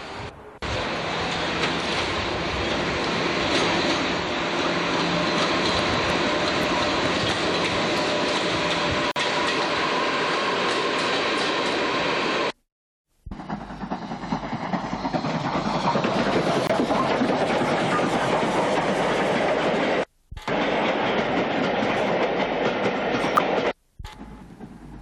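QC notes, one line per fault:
4.24 s, 17.45 s and 23.37 s: damaged data in a compressed stream. Each is a brief disturbance of about 15 ms. Corrupted bytes make the decoder misread frames there. It loses sync and hunts for the next frame header.
5.69 to 7.99 s: train of clicks. Roughly ten similar pops, averaging about 3.9 per second but unevenly spaced. They stand about 15 dB above the sound and are heard even in pauses. Nearby interference or a faulty connection is the likely cause.
9.11 to 9.16 s and 16.67 to 16.70 s: block of digital silence. The sound drops to zeros for 46 ms, then 23 ms, with no fade. The lengths fit missed output buffers of 2048 and 1024 samples.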